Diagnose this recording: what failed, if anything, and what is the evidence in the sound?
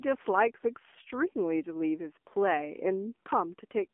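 The codec stage is the weak point: the whole clip has passed through the AMR narrowband mobile codec. The speech is confined to a telephone band of roughly 250 Hz to 3.4 kHz, with nothing above 4 kHz, and it has the plainly audible buzzy, synthetic edge of a low-rate vocal-tract model. That degree of coarseness points to one of the lower AMR-NB modes, around 7.4 kbps, with too few pulses per subframe to rebuild a natural-sounding voice.

The network link also failed briefly, producing AMR bit errors from 0.86 to 1.14 s. Unprotected bits in a run of frames, which the sound suggests is a dozen or more at about a 5 percent error rate, arrived corrupted while the checksum still passed, so the decoder trusted them. The voice keeps roughly its pitch and level, but for that quarter-second it turns hoarse, scratchy and gargly, because the excitation pulses land in the wrong places and the fine gain and spectral values are wrong.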